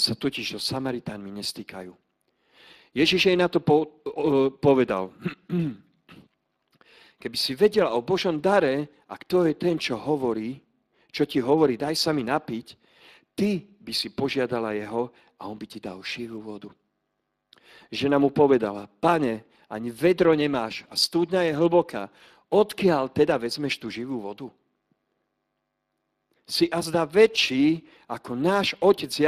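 Speex codec damage runs throughout the speech. This CELP coder spends too few bits on the excitation signal, so the voice comes out plainly noisy and hoarse, with a rough texture. The degree of damage fits a Speex bitrate around 22 kbps.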